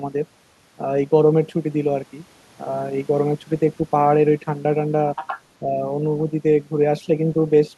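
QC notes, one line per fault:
5.15–5.41 s: other side's voice leaking through. A faint second voice appears under the speech, roughly 10 dB below it. The likely cause is far-end audio from the device's loudspeaker reaching the microphone and surviving the echo canceller.
5.6–5.8 s: speech suppressed in double talk. The talker's level dips by around 5 dB for about a fifth of a second, and the voice sounds pulled back. This likely happens because both sides overlap and the echo canceller turns everything down together.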